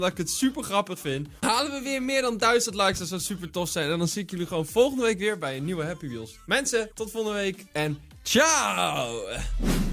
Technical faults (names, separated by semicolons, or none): none